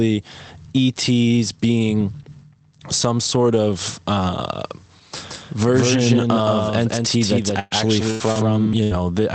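Speech carried over a call link, whose top end stops near 8 kHz, in keeping with a low-rate Opus stream. From 5.29 s to 8.73 s a doubled audio track runs under the talker: a second, full-band copy about 5 dB quieter trails by roughly 150 ms, most likely picked up a second time by a slower capture path. Unlike room echo or reverb, this copy has no decay tail and no added colour, and it switches in and out abruptly rather than fading. Three bursts of packet loss fall late in the clip, at 7.59 to 7.73 s, 8.11 to 8.22 s and 8.83 to 8.93 s, removing about 120, 100 and 80 ms of audio respectively. In each, the receiver stretches the last sound it had, so a voiced sound turns into a held buzz that sinks in level, or an unvoiced one into a fading hiss, before the speech picks up further on with that stretch skipped. Between the second and third bursts, at 8.32 to 8.37 s, a short concealed packet loss covers only about 40 ms. 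It passes as a quick smear or wobble rather than a sustained buzz, and it can swallow a brief consonant. What separates the two loss faults is length: the bursts are long enough to hear as a drawn-out, dimming sound with jumps in the speech, while the short one is only a brief smear.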